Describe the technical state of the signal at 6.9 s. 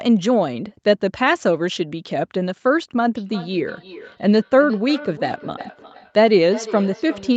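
Thin, ringing repeats of the speech return about every 0.4 s, at about 17 dB below it: feedback echo between two devices, running from 3.15 s to the end.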